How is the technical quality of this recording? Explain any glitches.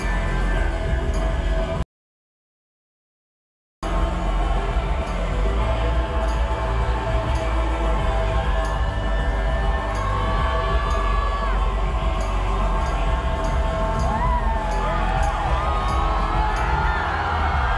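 The technical quality of this recording is sound, with no glitches to explain.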